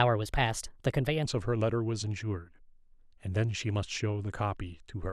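A section at the wrong speed runs from 0.0 to 1.25 s of this speech clip: the opening plays 1.2 times too fast, raising the pitch by about three semitones and hurrying delivery, likely from that stretch being replayed against a mismatched clock.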